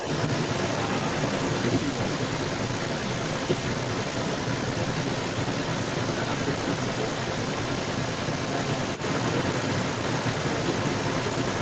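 From the very start right through to the end of the clip, there's a second voice sitting alongside the talker: the other side's voice leaking through, and it's roughly as loud as the main speech, maybe even a touch louder. The likely cause is the talker's device playing the far end on its loudspeaker while the echo canceller failed to strip that playback back out of the microphone signal, so it rides along the whole time inside the call audio's band, which stops around 8 kHz.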